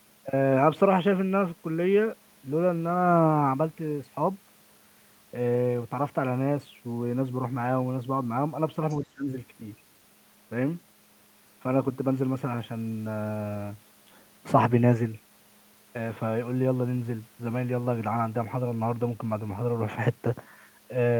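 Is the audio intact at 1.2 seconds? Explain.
Yes, the audio is intact at 1.2 seconds, with no fault audible at that point in the speech.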